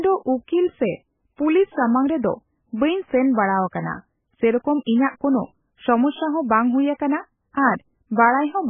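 From start to finish the speech has nothing above 3.5 kHz and a heavily damaged, watery texture, most likely from MP3 compression at a very low bitrate, around 10 kbps. Starved of bits, the encoder chops the treble at a fixed point and drops weaker frequency lines, which flicker on and off between frames. That flicker is what sets it apart from a simple low-pass filter, which would sound dull but steady rather than swirly and smeared on consonant onsets.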